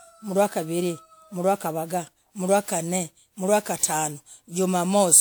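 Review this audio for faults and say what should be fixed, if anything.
Generation loss runs throughout. Repeated WMA encoding, likely about five passes, stacked up fresh quantisation noise. The result sounds swirly and hollow, with blurred attacks. To prevent it, keep working copies uncompressed and encode only once, at the end.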